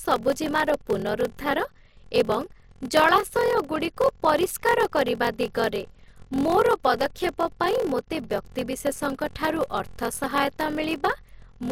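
Block size mismatch (padded) runs through this whole speech clip: one stage writes shorter blocks than the next reads, which fits a 1024-sample read, and the remainder of each block is zero-filled. The repeated gap produces a 43.1 Hz buzz, and the audio plays slower, at 0.861 times its proper speed.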